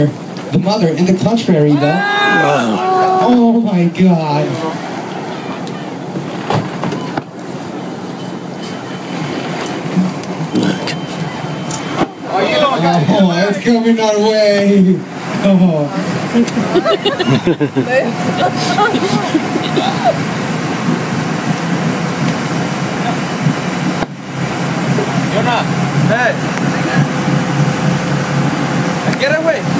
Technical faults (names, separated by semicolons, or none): gain pumping